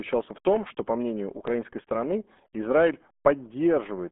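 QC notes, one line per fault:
throughout: RealAudio 14.4 codec. Speech is muffled and gargly, squeezed into a 200 Hz to 3.5 kHz band with nothing above 3.8 kHz. The heavy smearing of consonants fits an 8 kbit/s dial-up-era codec that discards highs and fine detail.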